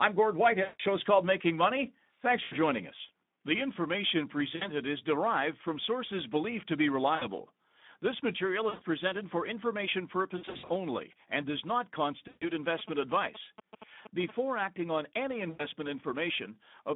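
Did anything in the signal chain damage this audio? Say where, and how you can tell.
Yes, two stages left marks. At the codec, the whole clip carries plainly audible Speex codec damage. The speech sounds hoarse and noisy, as the CELP excitation is starved for bits, at a rate that fits roughly 11 kbps. The band runs only from about 150 Hz to 3.7 kHz, so it's narrowband telephone audio. Nothing real sits above 4 kHz.

On the network side, you can hear VoIP packet loss concealed by the speech codec at 0.63, 2.43, 4.55, 7.15 (right after "sources believed to be"), 8.70 (just before "presented for information"), 10.37, 12.27 and 15.49 s (after "acting on any"). Each gap loses roughly a twentieth to a quarter of a second of audio. At 10.37 the dropouts are scattered over about a third of a second. The decoder keeps repeating its last pitch and filter with falling gain, so each hole turns into a buzzy or noisy, fading smear, and the voice stays weak for a moment after packets return.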